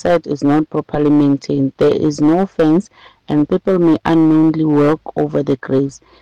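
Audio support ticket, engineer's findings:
Hard clipping across the whole file. Harsh fuzz on every loud peak, start to end. Something upstream is driving about 11 dB past full scale, so roughly 7 percent of samples hit the ceiling and get squared off. Those flat tops throw harmonics way up top, hence the grit. Probably a gain stage or converter input set too hot; pull the level back before that point.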